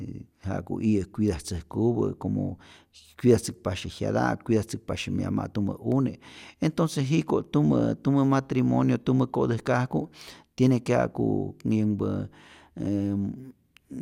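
No technical faults can be heard anywhere in this recording.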